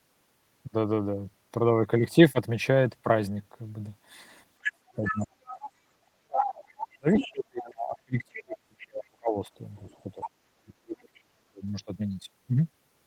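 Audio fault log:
4.62 to 11.2 s, other side's voice leaking through: a second voice breaks in at 4.62 to 5.69, 6.38 to 6.53, 7.13 to 7.28, 9.76 to 10.28 and 11.14 to 11.2 s, from about 5 dB to about 35 dB below the talker. This is likely loudspeaker playback that the echo canceller left in the microphone signal.
4.96 to 11.64 s, speech suppressed in double talk: the talker's level dives by roughly 35 to 40 dB at 4.96 to 5.7, 6.2 to 9.36 and 10.16 to 11.64 s, for about three seconds in the middle span. This likely happens because the echo canceller cannot separate the talker from the echo while both sides overlap, so it turns down everything.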